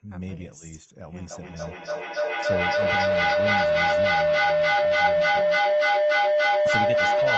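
From 1.3 s to the end, a feedback howl builds around 700 Hz as the mic-to-speaker loop keeps gaining, pulsing roughly every third of a second and peaking about 10 dB over the speech.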